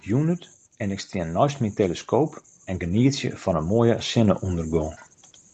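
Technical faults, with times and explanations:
0.06–4.98 s, automatic gain rising: the gain control judged the input too quiet and raised its gain by about 8 dB, so speech and background swell together gradually.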